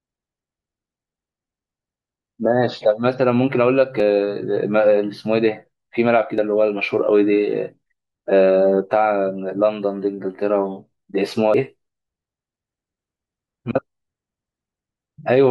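At 4.0, 6.38 and 11.54 seconds the speech jumps abruptly, losing roughly 40, 20 and 40 ms, most likely a dropped buffer (overrun) where unread samples were overwritten. Unlike a dropout, there is no silent gap, only a spliced skip forward.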